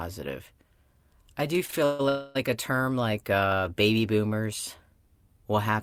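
Short stalls from a late packet occur at 1.65–1.70 s and 1.70–1.74 s, right after "I do." Each time a packet missed its slot, the jitter buffer emptied and the receiver stretched the last sound by 32 ms and then 18 ms. Nothing is lost, but the sound is held too long.

Call audio freezes follow at 1.84–2.01 s, still after "I do," and at 2.09–2.37 s, likely from packets held up in transit. The receiver extends the last sound for 146 ms and then 260 ms as a fading continuation rather than silence. Playback then resumes where it stopped, adding delay without dropping audio.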